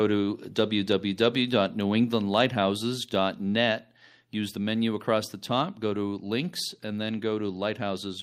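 At 2.04 s the microphone volume stepped down, likely the call software lowering the input gain in one step, so speech and background abruptly drop by about 2 dB.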